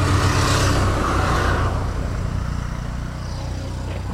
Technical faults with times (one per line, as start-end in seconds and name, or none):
none